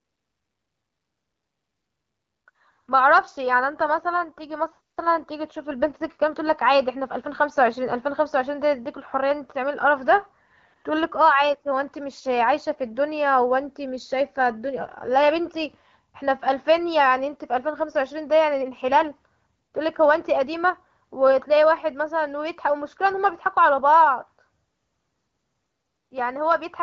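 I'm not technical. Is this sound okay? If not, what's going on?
No. Twice, from 3.6 to 6.2 s and from 14.66 to 15.94 s, the speech turns rougher and more synthetic. This is an AMR rate drop: on a weak phone signal, the call's HD Voice codec briefly switches to a lower-quality setting, then recovers.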